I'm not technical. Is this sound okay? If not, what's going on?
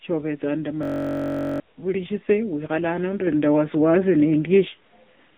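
No, there's a glitch. From about 0.83 to 1.6 seconds the speech gets stuck and turns into a steady buzz. That's a system hang loop: the computer briefly froze, but the sound hardware kept replaying the same tiny scrap of audio, just 21 milliseconds long, about 47 times a second. That fits a 1024-sample buffer repeating. Because the scrap is so short, it blurs into a hum rather than a stutter, and roughly 0.7 seconds of real speech is lost.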